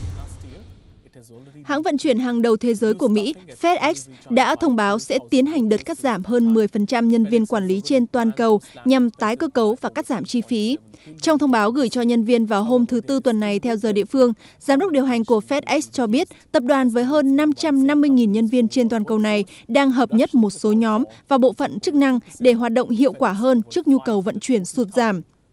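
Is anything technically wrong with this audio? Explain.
Yes. Throughout the clip there is a steady ticking at 10 per second, heard only while sound is present. This is a resampler restarted on every block: each 100 ms block was converted separately, likely from 24 kHz to 48 kHz, leaving a small error at every block edge.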